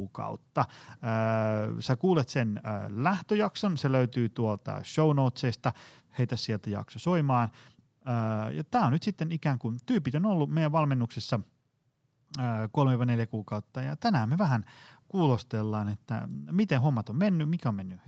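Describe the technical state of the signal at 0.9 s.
At 0.9 s the speech is intact, with no fault, just the band limit near 8 kHz that the call path's codec normally imposes.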